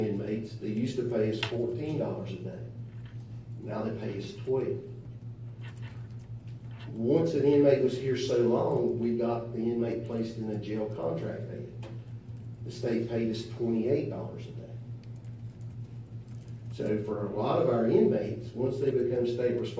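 Nothing stood out on listening; no technical faults can be heard at any point in the recording.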